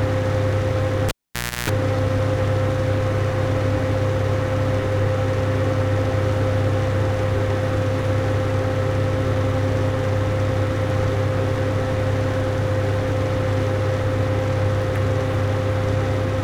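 At 1.08 s a cable is pulled and plugged in: a pop, about 0.56 s of near-flat waveform, within which 60 Hz buzz runs for 0.32 s, showing as harmonic stripes, and a second pop at 1.70 s.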